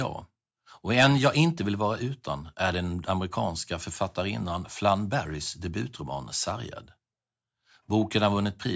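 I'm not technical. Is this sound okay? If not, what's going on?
Yes, nothing wrong can be heard in this recording.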